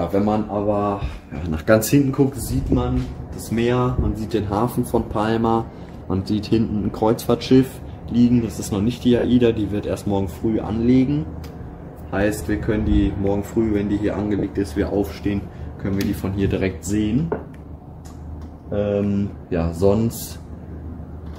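A brief noisy smear at 9.19 to 9.24 s and again at 14.39 to 14.43 s marks lost LE Audio frames, concealed by the LC3 decoder with a sign-scrambled repeat of the last spectrum.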